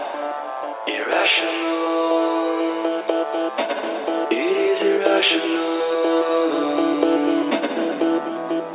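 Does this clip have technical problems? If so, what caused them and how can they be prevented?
No, there are no technical problems in this clip.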